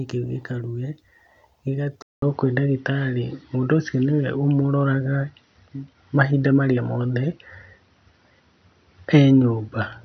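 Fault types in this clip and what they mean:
Input switched to a poorer device: the system likely changed microphones at 2.02 s; after a 200 ms gap, speech turns dull, with nothing above 6 kHz.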